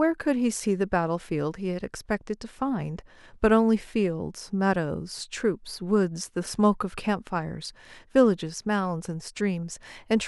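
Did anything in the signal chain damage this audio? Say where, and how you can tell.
No, nothing in the signal chain damaged this audio.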